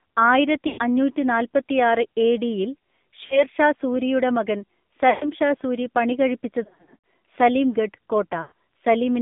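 Speech heard through a narrow, boxy telephone band runs throughout, with nothing below about 150 Hz or above 3.6 kHz and a buzzy, synthetic edge. That is the AMR narrowband mobile codec: sound is resampled to 8 kHz and rebuilt from a vocal-tract filter driven by sparse pulses, and the plainly audible roughness points to a low mode around 7.4 kbps. Five short breaks come from lost AMR speech frames, where the decoder repeated the last good pitch and filter settings at falling gain. They fall at 0.68–0.79 s, 3.26–3.44 s (just before "ഷാ സൂരിയുടെ മകൻ"), 5.10–5.29 s (between "ഷാ സൂരിയുടെ മകൻ" and "ഷാ സൂരി"), 6.64–7.01 s and 8.42–8.52 s. Each is heard as a smeared, warbling dip before the voice returns weak. The gap at 3.26 s is brief, consistent with about 40 ms missing. The ones at 0.68 s, 5.10 s and 8.42 s fit roughly 100–120 ms of concealment. The 6.64–7.01 s stretch is a cluster of dropouts spread over about 0.4 s, with no single run longer than about 60 ms.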